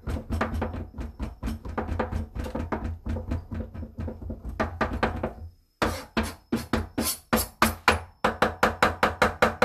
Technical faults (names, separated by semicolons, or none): none